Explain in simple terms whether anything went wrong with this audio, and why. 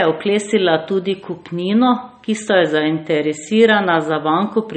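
Low-bitrate audio saved at a high bitrate, throughout: the speech lacks everything above 8.4 kHz, likely a squashed MP3 re-saved larger, which cannot restore lost detail.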